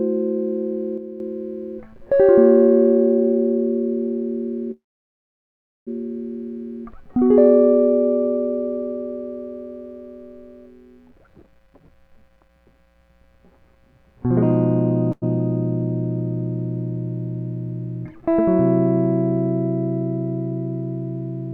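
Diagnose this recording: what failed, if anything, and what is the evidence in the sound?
One channel drops out from 0.98 to 1.20 s. For about a quarter of a second the music falls abruptly by about 6 dB and then returns just as suddenly. That is the signature of a lost stereo side after the mono sum: material common to both channels halves in level, and anything unique to the missing side vanishes. The cause is likely an intermittent analogue connection or a playback-path channel fault. A fade would glide, but this step is instant on both edges.

A call audio freeze runs from 4.71 to 5.89 s, and its likely cause is network delay that drained the jitter buffer. The last sound is carried on briefly and decays, leaving about 1.07 s of silence. When packets resume, the music continues exactly where it stopped. Nothing is lost, but 1.15 s of gap has been inserted and the stream now runs that much later. 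Unlike a dropout, the material on either side joins seamlessly.

A jitter buffer speed-up affects 11.08 to 14.27 s, where the music runs at 131% of its proper speed. Pitch is unchanged, and roughly a second of audio is removed in that span. The receiver, holding more audio than it aims for, cut many short pitch-period slices to catch up, so the tempo hurries and loses its steady pulse. A resampling speed error would raise pitch along with tempo, and here the pitch stays put.

A short stall from a late packet occurs at 15.12 to 15.24 s. One packet was missing when due, so the receiver stretched the current sound by 98 ms until the packet arrived. The result is a momentarily held tone with a slight buzz or dip, after which playback resumes with nothing missing. It differs from the earlier freeze in scale: the hold is brief and never decays to silence.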